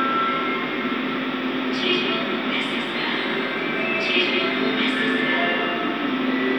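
From the first moment to the last, every sound in the clip arrives twice: a second full-range copy trails the first by about a fifth of a second, sitting only a few decibels quieter. That's a doubled audio track. The repeat is dry and identical, with no decay or room colour, so it sounds like a hard slapback rather than an echo. The likely cause is the same signal being picked up again through a slower path and mixed back in.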